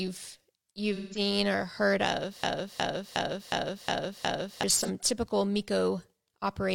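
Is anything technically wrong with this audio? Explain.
Yes. There are two kinds of fault in this speech.

From 0.95 to 1.19 s and again from 4.77 to 4.90 s there is AAC frame loss with concealment. About 171 ms and then 43 ms went missing, which fits four frames and then one. The decoder rebuilt the gaps from the last good spectrum. Both patches sound smeared, noisy or phasey.

From 2.43 to 4.63 s there is a broken-record loop. A 0.36 s fragment repeats exactly six times, back to back. The likely cause is a stalled player or stream resending its last buffer. The audio for that stretch is lost.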